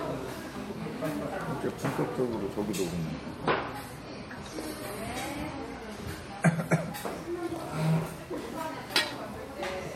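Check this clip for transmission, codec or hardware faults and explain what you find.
One fault is present: a stretch where an adaptive stream dropped to a lower bitrate. From 2.89 s to 6.89 s the quality falls abruptly with no gap, then recovers just as suddenly. The player switched to a cheaper rendition, likely because the connection slowed. The result sounds like an MP3 at around 40 kbit/s rather than 128 kbit/s. Nothing above 15 kHz survives, so the treble dulls, and coding artefacts rise throughout those four seconds.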